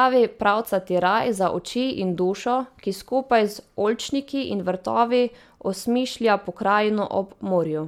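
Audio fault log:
No fault is heard anywhere in this speech clip.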